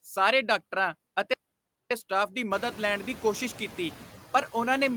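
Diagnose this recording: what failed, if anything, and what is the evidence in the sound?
Noise suppressor artifacts throughout, at the call-processing stage: steady noise is cut by about 16 dB, and the room noise rises near 2.5 s.

Audio dropout to silence, 1.34 to 1.91 s: 0.57 s of silence with no room tone, likely the input device or link dropping while the encoder kept writing.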